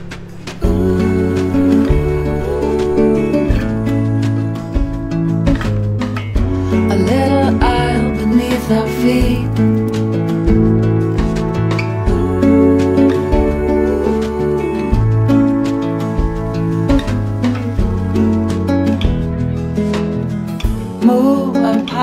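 No faults can be heard anywhere in this recording.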